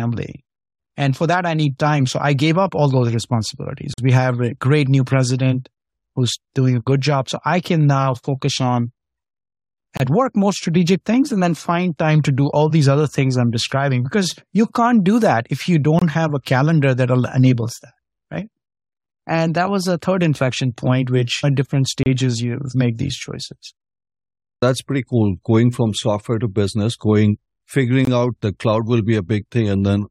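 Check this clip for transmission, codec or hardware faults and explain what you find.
The speech has a transmission fault: five gaps between stream segments.

At 3.94–3.98 s, 9.97–10.00 s (before "work more strategic things"), 15.99–16.02 s (between "do that if you" and "have a calendar that"), 22.03–22.06 s and 28.05–28.07 s (before "out the cloud will"), hard-edged silences of 22–45 ms interrupt the speech. These are gaps between stream segments, where the timing of adjacent 6 s segments leaves a small space that the player fills with silence. Unlike a dropout, no audio is missing. The speech resumes exactly where it stopped, and the holes recur about every 6 seconds.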